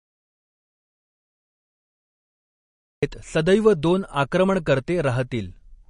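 The clip opens in an audio dropout to silence: dead silence, no room tone, until speech cuts in at 3.03 s, likely because the input was lost while recording continued. Throughout, there's audible MP3 compression damage, likely from low-bitrate encoding around 40 kbps: nothing above 10.6 kHz, with a watery, swirly edge on the speech.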